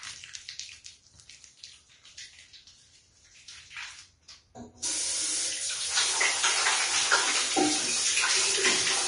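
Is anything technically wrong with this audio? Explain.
Yes. Across the whole clip the sound is hissy and grainy, with a rough, fizzy texture in the upper range, smeared transients, and nothing at all above 10.6 kHz. This is likely Vorbis compression at a low setting, with plainly audible damage that fits a bitrate around 34 kbps. The encoder cuts the top band off entirely and quantises the remaining treble so coarsely that fine detail is swapped for noise of similar energy, leaving that gritty, blurred character.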